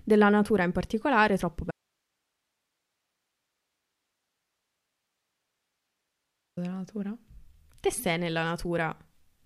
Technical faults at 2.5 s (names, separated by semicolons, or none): audio dropout to a faint residue